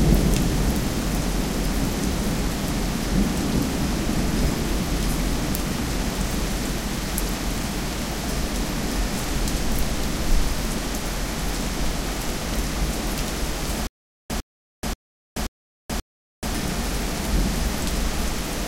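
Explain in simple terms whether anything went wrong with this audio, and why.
The playback likely stalled from 13.87 to 16.53 s, causing a stutter with silent gaps: a 0.1 s burst replays five times, with 0.43 s of silence between each.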